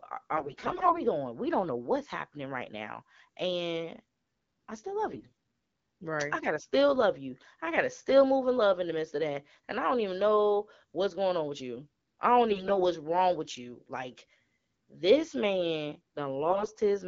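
Four short bursts of AMR bit errors appear at 0.36 to 1.00 s, at 5.11 to 5.32 s after "I still", at 12.49 to 12.81 s between "with you I don't" and "wrong with you", and at 16.50 to 16.68 s after "this man". Weakly protected bits in the wideband speech frames arrived flipped, so excitation pulses and fine pitch, gain and spectral values decode wrongly. The speech keeps its rough pitch and loudness but turns hoarse and gargly. Lost frames would bring dropouts or smeared repeats instead.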